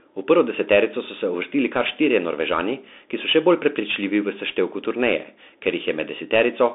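From start to finish the speech sounds boxed-in and telephone-like, with a granular hiss beneath it, scratchy s sounds, and roughness on loud, bright moments. That is the Bluetooth CVSD headset codec: the line passes roughly 250 Hz to 3.6 kHz, with nothing above 3.7 kHz. One-bit up-or-down coding, fitting a 64 kbps link, adapts its step too slowly for sharp high sounds, so they distort and the quantising grain stays audible.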